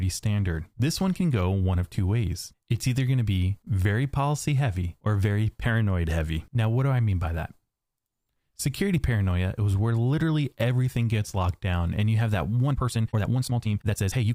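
From 12.65 s to the end, the speech suddenly rushes at 1.8x speed with pitch unchanged, a time-stretched section, likely squeezed by dropping short pieces, so it sounds rushed.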